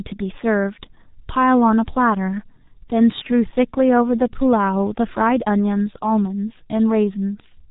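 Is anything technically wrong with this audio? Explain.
Yes. From start to finish the speech sounds muffled and hoarse, with consonants smeared together and almost no brightness. There is nothing above about 3.8 kHz, which cuts off the crisp edges of sibilants and plosives. This is G.723.1 codec damage, and it is heavy. The codec rebuilds speech from a coarse vocal model updated only once every 30 ms frame, at a rate that fits around 6 kbit/s. Quick articulation gets averaged away into a rough, buzzy blur.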